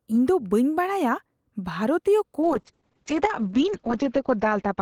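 Speech with a call bitrate drop from 2.43 s to the end. The encoder was starved of bits, so it codes coarsely and cuts audio bandwidth from 20 kHz to 8 kHz, sounding rough and muffled. The spectrogram shows energy above 8 kHz vanishing. The worst stretch lasts about 1.5 s, consistent with a fall from roughly 40 kbps to near 7 kbps.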